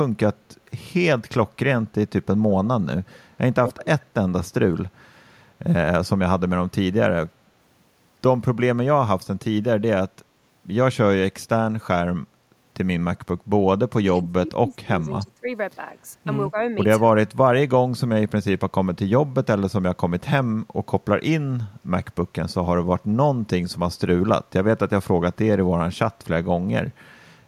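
A speech recording with two echo-canceller faults. An echo leak appears in four short bursts at 2.49–2.55 s, 3.08–3.18 s, 3.66–3.85 s and 4.01–4.06 s: a copy of the talker trailing the original by 200 ms, sitting anywhere from about 10 dB down (loudest at 3.66 s) to about 35 dB down. The likely cause is a far end on loudspeaker whose canceller let part of the microphone's pickup return. Speech suppressed in double talk follows at 13.91–15.47 s, 16.51–16.56 s and 17.23–17.70 s. Here the talker's level sinks by up to roughly 30 dB, briefly and more shallowly around 16.5 s. This is likely an echo canceller mistaking overlapping speech from both ends for echo and attenuating the near talker along with it.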